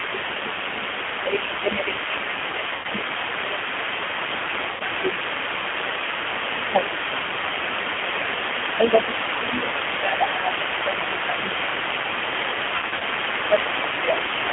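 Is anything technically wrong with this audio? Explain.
Yes, there are several faults. Throughout, the line is squeezed into a 200 Hz to 3.4 kHz band and coded by a G.729 codec, whose speech rebuilt from a vocal-tract filter and sparse pulses fits an 8 kbit/s G.729A stream. The damage is plainly audible: the voice has no top end and sounds rough and slightly synthetic.

Speech suppressed in double talk occurs from 0.0 to 5.13 s, 7.03 to 11.34 s and 13.5 to 14.49 s. The echo canceller likely could not tell the near talker from loudspeaker echo and pulled the level down. The voice dips by up to about 10 dB in the first stretch and about 5 dB later.

The other side's voice leaking through is present for the whole clip. A loudspeaker echo was likely not fully cancelled, so a second voice sits only a few decibels below the main talker and competes with it.

VoIP packet loss concealed by the speech codec appears at 2.75 to 2.87 s and 4.71 to 4.82 s. 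Each gap is 90 ms, which points to three lost packets. From 12.76 to 13.03 s, 150 ms is lost in scattered runs of up to 60 ms. The decoder stretches its last pitch and filter into a buzzy tone or coloured noise that fades, and the speech stays weak briefly afterward.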